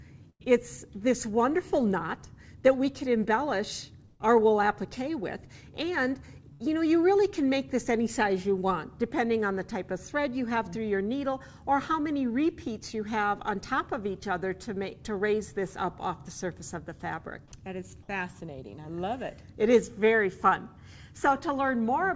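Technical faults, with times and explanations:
0.30–0.42 s, 4.06–4.21 s and 6.53–6.62 s, burst of packet loss: the sound freezes into a held, fading tail, then jumps ahead, skipping about 100, 140 and 60 ms. The receiver extended the last audio over lost packets in this G.722 call path.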